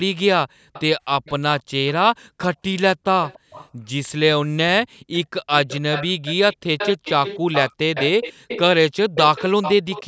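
At 0.48 to 0.73 s the room background is gated by the echo canceller. While the loudspeaker plays, the canceller pulls the microphone down hard, by about 40 dB at the deepest, so the ambience drops out for a fraction of a second and then returns. The same dips recur at 2.05 to 2.39 s, 3.39 to 3.92 s, 4.87 to 5.12 s and 8.33 to 8.48 s. On a waveform each is a near-flat gap in the floor. On a spectrogram it is a vertical band where the background texture vanishes across all frequencies, up to the 8 kHz ceiling of the call band.

From 0.73 to 3.68 s, and again from 5.13 to 10.04 s, a delayed copy of the speech trails the direct sound by 287 ms. This is an echo leak, likely from a loudspeaker whose canceller let part of the pickup through. In the first stretch the copy sits well below the speech. In the second it is noticeably louder. On a spectrogram the harmonic patterns repeat faintly, shifted right by that fixed delay.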